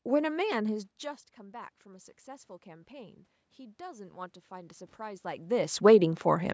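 From 1.02 s to 6.49 s, automatic gain rising: the gain control, answering an input that dropped about 17 dB when the talker moved away near half a second, lifts its gain by about 10 dB. Voice and room noise swell together gradually.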